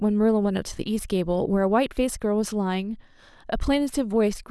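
Nothing in this speech recording stood out as a technical problem on listening.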